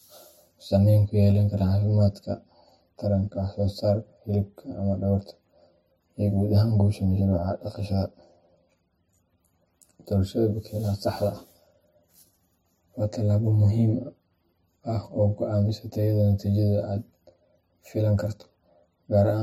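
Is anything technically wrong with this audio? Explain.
Yes. The speech carries channel delay (comb filtering) for the whole clip. One channel reaches the mix around 10 ms after the other, and when both are summed to mono, the shared signal cancels at evenly spaced frequencies. The first notch sits near 40 Hz, with further notches roughly every 100 Hz above it. The speech sounds hollow and phasey. A spectrogram would show fixed, regularly spaced horizontal dark bands that stay put however the speech changes.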